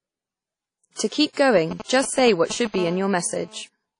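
A short speech recording with three faults. The whole clip has likely gone through a Windows Media Audio (WMA) encoder at a low rate, consistent with about 32 kbps. That transform codec quantises long blocks coarsely, so its error spreads over tens of milliseconds and weak spectral lines are discarded. The result is plainly audible WMA compression damage: a ringing, washy quality, hiss that rises and falls with the speech, and nothing above 10.1 kHz.

From 1.56 to 2.76 s, a 2G phone close to the recording chain is exchanging signalling with the network, sending short groups of radio bursts. The audio circuitry rectifies those pulses into the audio path. These GSM signalling bursts come through as a galloping dit-dit-dit of short 217 Hz buzzes, roughly 10 dB below the speech.

From 2.78 to 3.63 s, the phone has moved into a call and transmits continuously in bursts 217 times per second. 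Rectification of that pulse train produces GSM phone buzz, a hard, raspy 217 Hz tone with many harmonics that bears no relation to the speech. It sits about 18 dB below the speech and runs steadily through that stretch.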